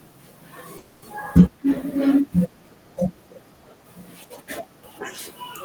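From 0.77 to 1.04 s the speech stops moving forward and the last instant of sound is stretched into a fading buzzy hiss, a call audio freeze. The likely cause is packets held up in transit, leaving the jitter buffer empty so the receiver had to improvise about 250 ms of sound. Speech then resumes where it stopped, now running about 250 ms late, with nothing lost. A spectrogram shows frozen horizontal bands thinning out; the waveform shows a repetitive, decaying stretch.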